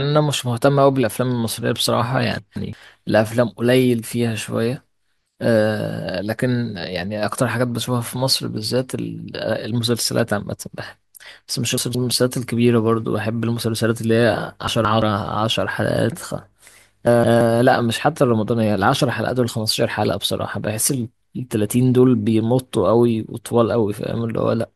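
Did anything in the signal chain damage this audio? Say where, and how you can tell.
Yes. Four spots have chunks out of order, at 2.39–2.73 s, 11.78–12.12 s, 14.68–15.02 s and 17.07–17.41 s. The fault sits at the buffer or driver stage. Each span holds two chunks of about 170 ms, and the later one plays first, so the speech jumps ahead, then back, then on again, across three hard joins. Unlike a dropout, no sound is missing or silenced. Unlike a stutter, nothing is repeated. Everything is there, just in the wrong order.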